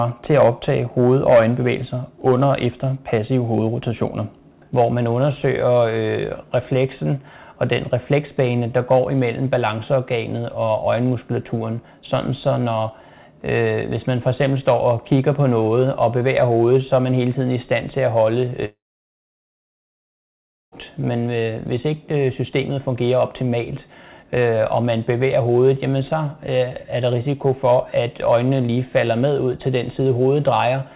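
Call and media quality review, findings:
Sound breaks off at 18.65 s: brief fading buzz continuing the last sound, then near-silence for about 1.95 s, audio resuming at 20.75 s with roughly 2.1 s gone. Likely long network dropout; receiver conceals the gap, then mutes. Call path: G.711 mu-law at 64 kbps, band capped at 4 kHz.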